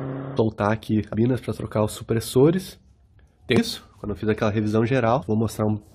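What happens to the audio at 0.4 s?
Just before that point, at 0.36 s, there is damaged data in the compressed stream: the decoder hits corrupted bytes, misreads the frame and loses sync while hunting for the next valid header. The result is a very brief chirp or blip lasting about 14 milliseconds.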